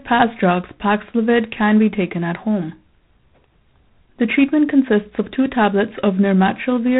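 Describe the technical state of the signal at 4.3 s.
At 4.3 s the speech carries G.726 ADPCM damage, present across the whole clip: coarse difference coding leaves a harsh, rasping hiss that rises and falls with the speech level, which fits 24 kbit/s. Nothing passes above 3.9 kHz, but unlike plain band-limiting, the in-band sound is also gritty.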